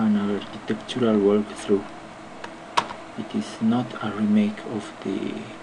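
At about 0.53 s the sound jumps forward by roughly two compressed frames, consistent with a frame length of about 26 ms, so around 50 ms of audio is skipped. Unlike a dropout, there is no silent gap.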